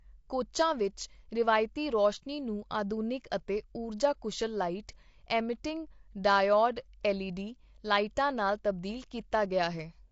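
It's a speech clip, and the whole thing sounds rough and grainy, with plainly audible codec damage throughout. That's likely low-delay AAC compression (AAC-ELD), squeezed to a rate that fits about 32 kbps. Too few bits leave noise between the pitch harmonics, so the voice loses its smoothness.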